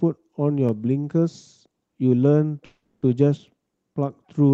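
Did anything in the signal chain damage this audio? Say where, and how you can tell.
Yes: a call audio freeze at 2.65–3.04 s, likely network packets delayed and draining the jitter buffer; the sound stretches into a fading buzz, then resumes intact, just late.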